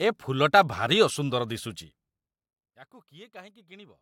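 A speech recording with zipper noise from about 1.73 s to 2.56 s, while the level drops by roughly 25 dB. The gain is being stepped down instead of ramped, at around 200 small jumps per second, so each jump leaves a tiny click and together they form a fine buzzy zipping on top of the speech. That rate likely points to the gain being updated once per processing buffer with no smoothing between updates.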